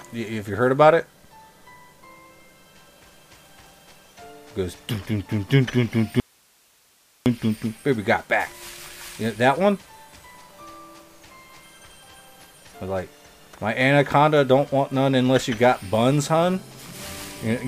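From 6.20 to 7.26 s an audio dropout to a faint residue leaves only hiss about 40 dB down, likely from a lost source feeding a still-live path. The waveform shrinks abruptly to a thin noise band; the spectrogram shows a sharp-edged, hiss-filled gap.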